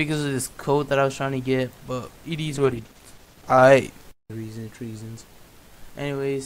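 A call bitrate drop at 2.5–3.69 s makes the audio coarse and muffled for about 1.1 s, consistent with the encoder falling from about 128 kbps to around 13 kbps.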